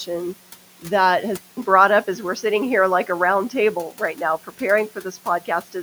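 Speech, with room noise about 22 dB down. At 1.37 s, 200 ms of silence, then duller, narrower-band sound, about 5 dB level shift: likely an input switched to a poorer device. The gap and changed noise floor rule out plain filtering.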